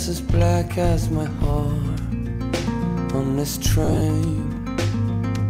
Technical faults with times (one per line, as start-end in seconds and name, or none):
3.84-4.01 lost LE Audio frames